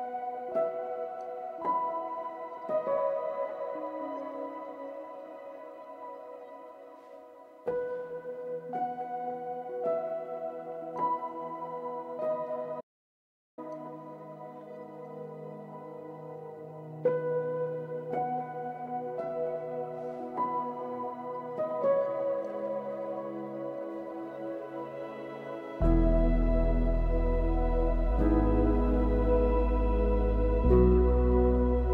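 At 12.81 s the sound cuts out abruptly and stays gone until 13.58 s, an audio dropout to silence lasting about 0.77 s. The gap is silent, with no room tone or noise floor, so the input was likely lost upstream while the recorder kept writing silence. Unlike a noise gate or a fade, there is no gradual decay and nothing residual underneath, and the sound resumes mid-flow with that stretch missing.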